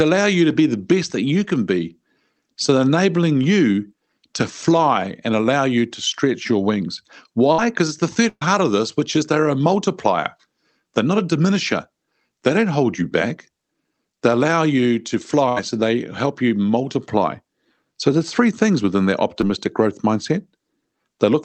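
Just after "to stretch your wings", at 7.52–7.59 s, a burst of packet loss drops about 60 ms. The receiver stretches the last sound, turning it down, and then jumps ahead. Longer gaps follow at 8.29–8.42 s, about 120 ms ending in brief silence before "of this which is", and at 15.49–15.57 s, about 70 ms. At 19.41 s, between "three things within their" and "growth mindset", a short concealed packet loss of about 10 ms leaves only a brief smear. It is too short for the held, fading sound that marks the bursts.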